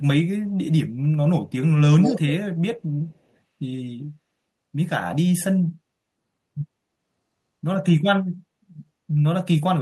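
From 1.99 to 2.32 s a delayed copy of the speech trails the original by 154 ms, only a little quieter than the direct sound. This is echo leak, likely from a far-end loudspeaker whose echo canceller let some of the microphone pickup back into the call.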